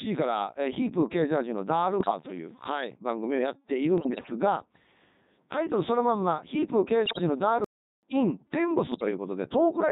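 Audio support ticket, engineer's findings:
Codec 2 vocoder, whole clip. Robotic, buzzy speech at 3.2 kbit/s. Heavy damage. Only pitch, voicing, energy and spectral envelope survive the link. The decoder rebuilds the voice from sine waves, so the original waveform is gone.

Bit errors on digital voice radio at 2.00–2.11 s, 3.98–4.32 s, 7.06–7.21 s and 8.92–9.11 s. Sudden jumps in pitch, level and tone colour. Bleeps and warbling gibberish. The error rate is heaviest at 2.0 s, near a tenth of bits, and lightest at 8.9 s. Each corrupted bit distorts whole vocoder frames.

Playback stall, 7.64–8.03 s. Output drops to silence for about 385 ms mid-flow, then resumes. Likely cause is the player buffer running dry or its thread blocking. Component is the playback path, downstream of the radio decoder.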